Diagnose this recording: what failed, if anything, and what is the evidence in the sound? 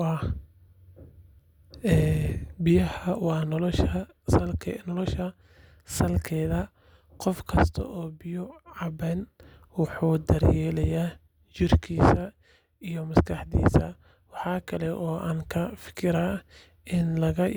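Nothing stood out on listening: no stage of the chain, from capture through to playback, left an audible mark on this speech recording.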